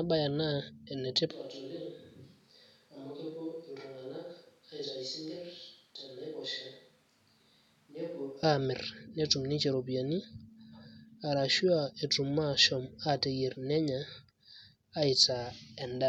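From 1.31 to 8.43 s, the speech turns roomy and hollow, drops about 10 dB and loses bass. A likely switch to a distant microphone.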